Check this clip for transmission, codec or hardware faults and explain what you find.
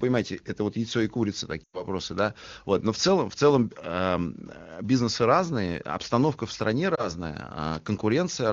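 Two speech dropouts from lost AMR speech frames. At 1.63 to 1.85 s, after "вот яйцо и курица", the sound drops to near silence within two frames, consistent with about 100 ms of failed frames. At 6.95 to 7.08 s, after "разные обстановка в стране", there is a brief dip or warble, consistent with a single 20 ms frame. In each case the decoder repeats the last good pitch and vocal tract settings at falling gain. Unlike a hard digital mute, the sound carries on briefly at falling level, and it returns weak or rough for a moment. The AMR wideband (HD Voice) codec is running at a high rate and leaves little trace of its own.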